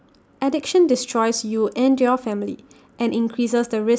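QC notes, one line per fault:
Nothing to flag on this speech clip; it all comes through without a hitch.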